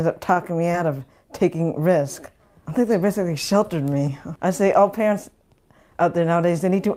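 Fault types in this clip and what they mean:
Short stall from a late packet: A packet arrived late, and the receiver's jitter buffer ran dry. With nothing new to play, the receiver held the last sound for about 22 ms, from 0.33 to 0.38 s. Then it picked up exactly where it had stopped. Nothing is lost. The sound is only drawn out slightly, with a faint buzz or dip. Everything after that point plays about 22 ms later than before.
Short concealed packet loss: Around 0.72 to 0.78 s, about 20 ms of audio never reached the decoder in time. The receiver covered the gap by carrying the preceding sound forward for about 18 ms. It used the pitch where the sound was tonal and shaped noise where it was not. Then it faded back into the real signal. The result is a brief smear or wobble. A small amount of time is also added.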